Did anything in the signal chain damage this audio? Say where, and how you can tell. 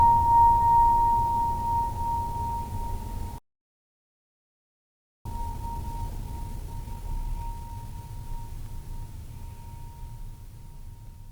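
Yes. A playback stall begins at 3.38 s. The music stops mid-flow and stays silent for about 1.87 s, until 5.25 s. This points to the playback stage, likely a player starved of data or a blocked output thread.

Time-compressed catch-up runs from 5.25 to 8.25 s. The music plays about 1.25 times fast but keeps its pitch. The player is clearing its backlog by cutting out small slices and cross-fading the joins.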